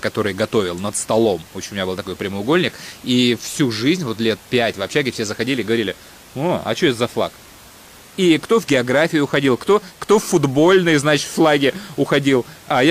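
No technical faults can be heard in the speech; the only thing beneath it is the room's own background noise, sitting about 25 dB below the speech, which belongs to the recording itself.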